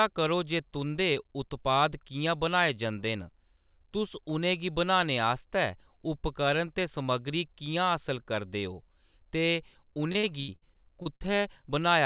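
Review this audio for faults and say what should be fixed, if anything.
From 10.12 to 11.30 s the speech breaks up with repeated packet loss, giving a choppy, robotic sound. Nine gaps, the longest 76 ms, are patched by extending the preceding sound, so about a quarter of that stretch is concealment. On a spectrogram this shows as smeared, repeating slices, all below the 4 kHz ceiling of the narrowband call path. The waveform shows short looped segments where 320 ms of real signal is missing. A more stable network route, a deeper jitter buffer or forward error correction would prevent it.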